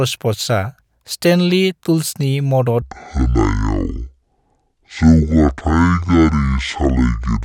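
From 2.82 s, right after "स्टेनली टुल्सनि", the speech drops to about half speed and roughly ten semitones lower, likely a wrong playback clock. Tempo and pitch fall together, unlike a pitch shift.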